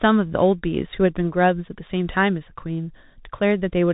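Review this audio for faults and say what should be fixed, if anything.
The speech passed through a Bluetooth CVSD headset codec for its whole length, coding each sample as a single up-or-down bit with an adapting step, which fits a 64 kbps link. Nothing above 4 kHz survives, s sounds turn scratchy, and a granular hiss sits underneath throughout. To prevent it, record through a wideband connection or a wired microphone rather than the headset's narrowband call profile.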